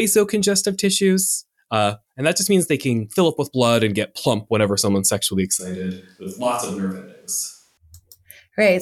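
At 5.60 s, right after "plump whenever someone's sexually", the speech abruptly turns roomy and hollow with less bass. It drops roughly 5 dB, and room noise sits around 40 dB below the speech until it snaps back at 7.77 s. The likely cause is a switch to a distant microphone after the close microphone's signal dropped out.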